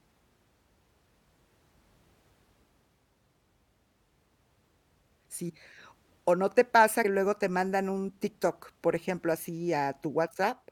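Whole compressed frames were dropped, either missing from the file or rejected by the decoder as damaged, so the speech jumps forward by multiples of a 23.2 ms frame. This compressed frames skipped fault occurs at 2.23 s (about 150 ms lost), 5.48 to 5.50 s (about 100 ms), 7.04 s just before "luego te mandan un" (about 100 ms), and 9.36 s right after "por ejemplo" (a single frame, about 20 ms).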